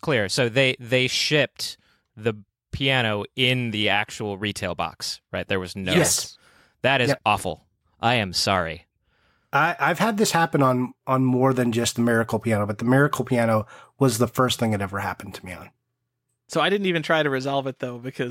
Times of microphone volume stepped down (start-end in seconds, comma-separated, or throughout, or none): none